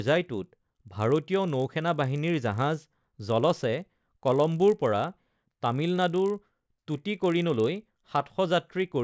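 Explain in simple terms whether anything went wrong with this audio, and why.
Something did go wrong: a 50 Hz buzz runs under the speech the whole way through, only while someone's talking. That's a resampler restarted on every block: the audio was converted in 20 ms chunks, each handled separately, so every chunk edge leaves a tiny tick.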